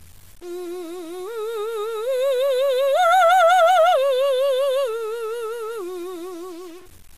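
From the first moment to the end, the music has a coarse, grainy edge that rides along with it, which is low bit depth without dither. The noise sits roughly 30 dB below the music. That points to about 7 bits, and the way quiet passages crunch rather than soften suggests the samples were likely truncated with no dither to smooth the steps.

Running alongside that for the whole clip is generation loss. The top end stops dead at 15.2 kHz, and there's a swirly, hollow smear over everything, with attacks that blur instead of snapping. That's more damage than a single pass would leave. It fits MP2 at 96 kbit/s, with the signal likely decoded and re-encoded about five times, each pass adding its own noise and holes to the last.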